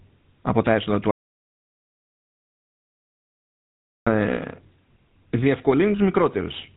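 From the start the speech carries the buzzy, gravelly roughness of the GSM full-rate codec, a sound consistent with its 13 kbps coding. The codec rebuilds the voice from a vocal-tract model driven by a regular pulse train that keeps only every third excitation sample, so voicing turns coarse and rasping. On a spectrogram, energy stops sharply at 4 kHz with nothing above, and harmonics look smeared and grainy rather than cleanly banded.

Right after "από τα έσοδα του", at 1.11 s, there is an audio dropout to silence lasting until 4.07 s, about 2.95 s in all. The input was likely lost, perhaps through a disconnected device, a failed link or a stray mute, while silence kept being written. The speech cuts off mid-flow and returns abruptly, with no room tone in between. The waveform shows a flat line, and the spectrogram shows a fully blank vertical band.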